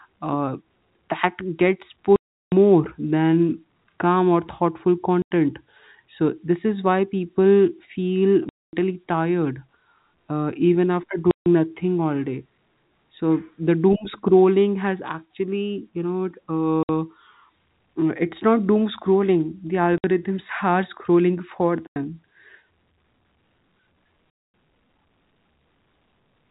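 Packet loss filled with silence cuts the speech eight times: 2.16–2.52 s (360 ms, just before "than calm or thoughtful"), 5.22–5.31 s (90 ms, right after that phrase), 8.49–8.73 s (240 ms), 11.31–11.46 s (150 ms, between "uh even after" and "nothing all day"), 16.83–16.89 s (60 ms), 19.98–20.04 s (60 ms), 21.87–21.96 s (90 ms) and 24.30–24.54 s (240 ms). Each gap is a run of missing packets replaced by digital silence, and every length is a multiple of 30 ms, which points to 30 ms packets. The abrupt cut-off and restart leave hard edges at each gap in the 4 kHz-limited telephone-band sound.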